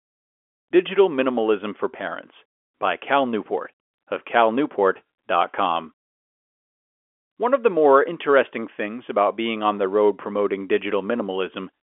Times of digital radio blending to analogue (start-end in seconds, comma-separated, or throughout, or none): none